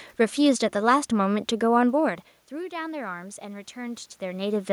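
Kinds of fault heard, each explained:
Automatic gain rising: The gain control sensed the level falling and turned itself up slowly. The input dropped by about 16 dB. From 2.55 s to 4.67 s the gain climbs by about 4 dB. Voice and room noise swell together, so the background rises with the speech. The climb is gradual, spread over about two seconds. It recovers only part of the drop, so the voice stays quieter. The talker also shifts position near 4 s.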